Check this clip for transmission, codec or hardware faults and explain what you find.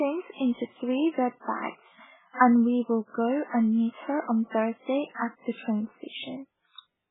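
There's one fault here, and it runs the whole way through the speech. It sounds like heavy MP3 compression, likely at a very starved bitrate, around 8 kbps. The encoder has cut everything above 3.8 kHz, so it's dull, and weak frequency lines flicker frame to frame, leaving a watery, swirly texture with smeared consonant attacks.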